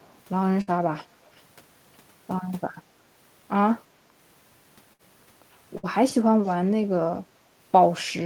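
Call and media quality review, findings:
Echo leak, likely from a far-end loudspeaker whose echo canceller let residual pickup through. A very faint delayed copy of the speech, about 350 to 360 ms late, is heard at 0.00–0.19 s, 1.26–1.42 s and 6.46–6.54 s, in short scraps.

Burst of packet loss in the network path. Roughly 60 ms of audio was lost in a row each time. The receiver extended the last sound for about 60 ms, fading it as a held buzz or hiss, then resumed with about 60 ms missing. This occurs at 0.61–0.70 s, 4.93–5.02 s and 5.77–5.86 s.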